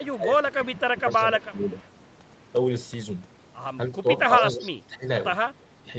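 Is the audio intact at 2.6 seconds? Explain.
Yes, the speech at 2.6 seconds is intact, with nothing at that moment beyond the ordinary narrowed, call-like sound of its path.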